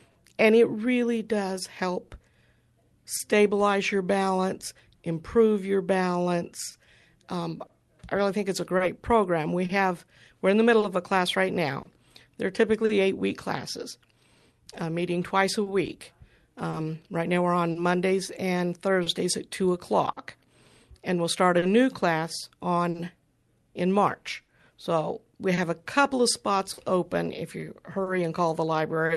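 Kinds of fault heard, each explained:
Clock drift between sender and receiver: The sending device's clock runs a few percent slower than the receiver's, so the jitter buffer keeps draining. Throughout this speech the receiver has to stretch or patch the audio, leaving small, unevenly spaced timing hiccups from start to finish.
Short stall from a late packet: A packet arrived late and the jitter buffer briefly ran dry. Between 0.11 and 0.17 s, just before "and it really", the receiver held the last sound for about 40 ms, so a sound lingers with a slight buzz or dip, though nothing is lost.
Repeated timing corrections: To keep pace with the slower sender, the receiver repeatedly inserts short stretches of extra audio. From 1.36 to 14.54 s, ending before "uh meeting twice a", this adds about a tenth of a second, making the tempo run slightly slow, at about 99% speed.
Scattered short gaps: Individual packets went missing or arrived late here and there, and each hole was filled by extending the preceding sound. 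Roughly ten such patches of up to about 40 ms fall in each of the stretches from 2.1 to 12.9 s and from 15.6 to 29.1 s, heard as brief ticks or smears.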